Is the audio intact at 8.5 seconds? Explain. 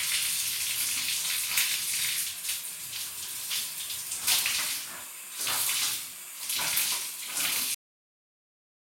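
No, at 8.5 s the clip has a cut-off end: from 7.74 s the final buffers were never written, so the sound stops abruptly into digital silence without decay, unlike a dropout, it never resumes.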